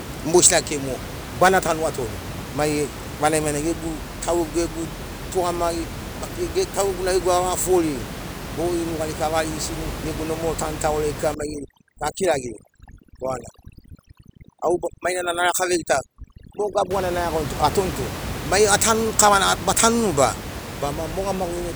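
From 11.34 s to 16.91 s the speech shows overdone noise removal: a noise reduction stage set too aggressively clamps frequency bands near its noise estimate. The background, room noise about 10 dB below the speech, drops and breaks up into twinkling specks.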